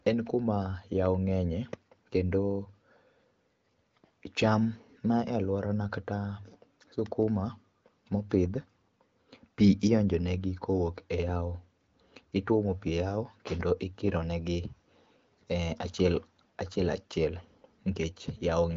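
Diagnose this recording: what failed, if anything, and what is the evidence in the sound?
Nothing failed: the speech sits inside the AMR wideband (HD Voice) codec's band with nothing above 7.6 kHz, and its clarity points to one of the upper rates, around 18 kbit/s, so every stage is doing what that codec does by design.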